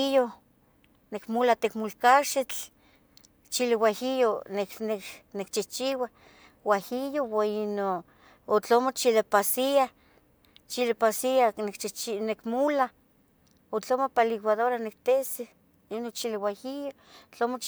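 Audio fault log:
No faults are heard in this speech recording. Nothing in the audio calls for a timed entry in this log.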